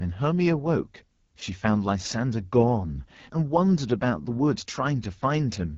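Throughout, the AMR wideband (HD Voice) codec roughens the speech into a raspy buzz fitting its low 8.85 kbit/s mode, yet the noise-filled top band reaches 7 kHz, unlike narrowband.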